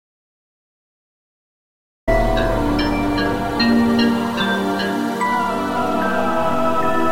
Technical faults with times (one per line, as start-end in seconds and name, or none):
0.00-2.08 audio dropout to silence